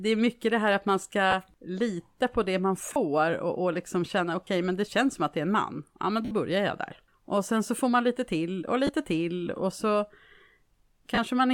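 Lost LE Audio frames break the speech at 1.31, 2.93, 4.46, 6.25 to 6.31, 8.87 and 11.15 s. The LC3 decoder fills each 20 to 60 ms gap by repeating the last spectrum with randomised phase, so tonal speech briefly turns into a noisy smear, longest at 6.25 s.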